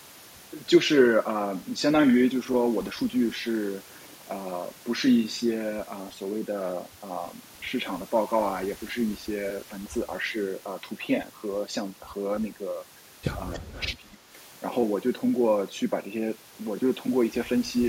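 At 13.53 to 13.59 s, an echo leak appears. The far end is likely playing the call over a loudspeaker, and its echo canceller failed to remove all of what its microphone picked up, so a short piece of the voice was sent back. It arrives 307 ms after the original, roughly 20 dB below the speech, as a brief, faint, delayed scrap of the same voice.

From 13.58 to 14.36 s, the speech is suppressed in double talk. With both sides sounding at once, the echo canceller likely could not tell its own talker apart from the loudspeaker echo and turned everything down together. The result is a dip in the speech of up to about 20 dB, spread over roughly half a second in total, so the voice sinks while the other side is active.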